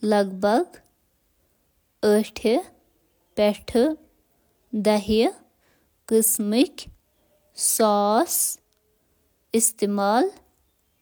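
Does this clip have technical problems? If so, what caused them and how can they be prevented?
No, the speech signal stays continuous and stable throughout, with nothing in it pointing to a recording, transmission or processing fault that would need preventing.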